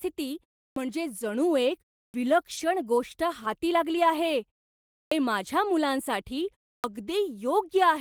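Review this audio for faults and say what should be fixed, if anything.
Clipped start after a pause shows up four times: at 0.71 s, 2.09 s, 5.06 s and 6.78 s. Each follows a short gap of about 0.3 to 0.6 s, and each time roughly 50 to 60 ms of the onset is missing, so the speech snaps in already underway. That's the output device dropping into a low-power state during the silence and not being ready when audio resumes. To prevent it, keep the output stream alive through silences, for example by feeding it low-level or zero samples instead of letting the device idle.

There are also three spots of lost packet rebuilt from error correction: 0.89 to 0.91 s, 2.57 to 2.59 s, and 3.89 to 3.95 s. There's no gap at any of them, but the sound turns briefly rougher and noisier. The first two are 20 ms each, which fits a single lost packet. The third runs about 40 ms, which points to two lost packets. 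In each case the decoder is playing the low-bitrate backup copy carried in the following packet, and that copy simply holds less detail. To prevent it, sort out the packet loss on the network path, or give the jitter buffer enough headroom to catch late packets before falling back on the redundant copy.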